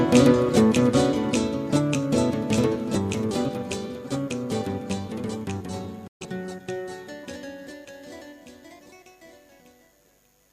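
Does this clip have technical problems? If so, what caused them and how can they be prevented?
Yes. A digital broadcast dropout runs from 6.07 to 6.26 s. The receiver stopped getting valid frames and muted with an 8 ms fade, losing 128 ms of programme, which fits about three lost frames. On the waveform this shows as a flat line after a brief ramp, and on a spectrogram as a blank vertical band across all frequencies. A stronger, steadier signal, through better antenna placement or reception, would prevent it.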